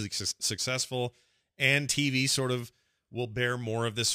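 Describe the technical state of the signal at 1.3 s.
A hiss and roughness about 25 dB below the signal sit on the speech, worst on loud, bright sounds. This is sample clock jitter, present throughout: a timing wobble of a few microseconds mistimes samples where the waveform is steep.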